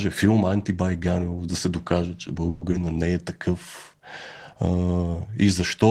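Just after "да се докаже че", from 2.49 to 2.63 s, the sound stops advancing and the last moment is stretched into a fading buzz for about 120 ms, with no silence and nothing lost. This is likely a call audio freeze: delayed packets emptied the jitter buffer until delivery resumed.

At 2.71 to 2.74 s comes a short concealed packet loss. Roughly 40 ms of audio never reached the decoder, and only about 10 ms was synthesised from the preceding sound, so the passage jumps forward with a brief smear as the buffer delay shrinks by about 30 ms.

From 2.79 to 3.00 s a jitter buffer slow-down rebuilds that reserve. The receiver repeats pitch periods and adds about 47 ms, so the audio plays at 82% speed with unchanged pitch, sounding drawn out.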